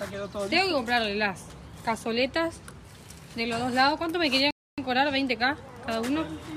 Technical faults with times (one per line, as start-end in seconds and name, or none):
4.51-4.78 rebuffering stall